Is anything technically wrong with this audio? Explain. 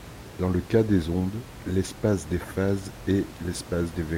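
No, nothing is technically wrong with this audio.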